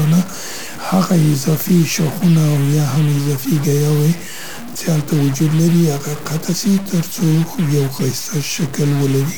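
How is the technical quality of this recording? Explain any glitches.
The quality is poor: harsh, buzzy distortion runs through the whole clip. Stuck bit, throughout: likely one data bit held fixed, shifting values by about -25 dBFS, so pauses fill with noise and the waveform shows stepped offsets and broadband spectrogram haze.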